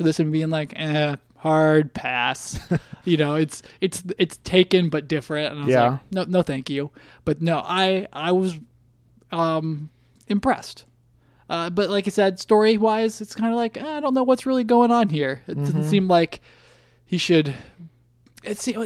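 No technical faults are audible anywhere in the recording.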